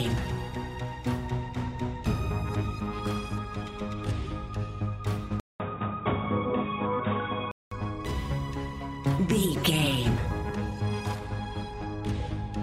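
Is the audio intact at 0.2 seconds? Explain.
Yes, the audio at 0.2 seconds is intact, with no dropout, click, distortion or other audible fault at that moment.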